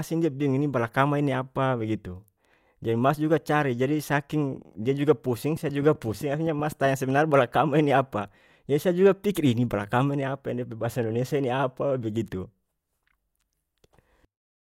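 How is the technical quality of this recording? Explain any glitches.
The recording has one clear glitch. From 5.56 to 6.86 s a train of clicks ticks over the speech: about ten sharp, near-identically shaped pops, evenly spaced at roughly 7.8 per second and about as loud as the speech. A steady repeating pulse, likely electrical interference or a faulty connection, is the cause. The regular spacing and matching click shape set it apart from random crackle or dropouts.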